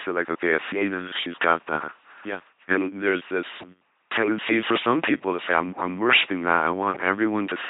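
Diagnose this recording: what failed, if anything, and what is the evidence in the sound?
The failure is at the codec stage. Throughout the speech, the voice has the buzzy, mechanical robot quality of an LPC-10 vocoder, and the damage is heavy. Each moment is rebuilt either from a pulse train, which buzzes, or from noise, which hisses, through a short all-pole filter. This fits a 2.4 kbit/s LPC-10 stream. On a spectrogram, nothing appears above 3.8 kHz. Voiced stretches show rigid, evenly spaced harmonics under smooth formant bands, and unvoiced stretches show flat noise.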